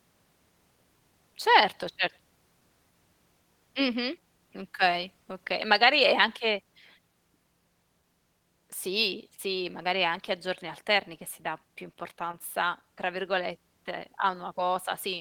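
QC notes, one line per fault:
12.31–12.35 s, short concealed packet loss: a brief smear in the speech, a wobble where the sound should run cleanly, and a short consonant here could be blurred or lost. About 20 ms of audio failed to arrive at the decoder in time, and the receiver covered the gap with roughly 19 ms of synthesised sound carried on from what came just before, then crossfaded back into the real signal.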